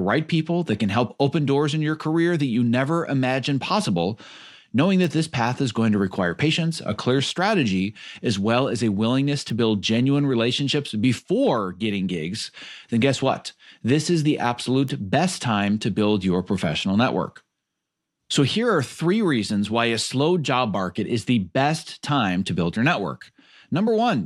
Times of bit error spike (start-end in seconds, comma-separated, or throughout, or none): 5.04, 9.50, 14.88